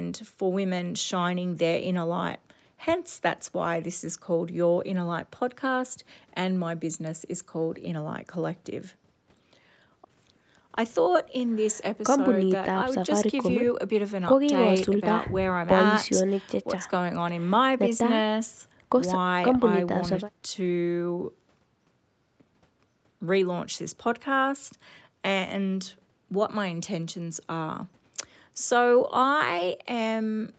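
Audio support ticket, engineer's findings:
No faults found in this speech recording. Content stops around 8 kHz, consistent with the Opus call path and the call microphone processing, which also removes the lowest bass.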